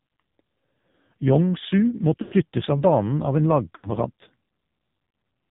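From the start, the whole clip carries the sound of the AMR narrowband mobile codec. The speech is heavily coded and has a buzzy, synthetic edge, as if the voice were rebuilt from a few pulses pushed through a crude vocal tract model. That texture fits one of AMR-NB's lowest modes, around 5.9 kbps. A spectrogram shows everything cut off flat at 4 kHz, with smeared, blocky harmonics below.

At 2.22 s there are lost AMR speech frames until 2.34 s. The decoder runs on the last good pitch and spectral shape with falling gain, so the sound holds and drags into a warbly smear, then sinks toward silence before coming back faint and rough. This fits about 100 ms of missing 20 ms frames. The waveform shows a tapering envelope. The spectrogram shows frozen, fading harmonic bands.

The same concealment happens again from 3.76 s to 3.90 s, over a slightly shorter stretch of about 80 ms. It gives the same brief drawn-out dip and a rough recovery.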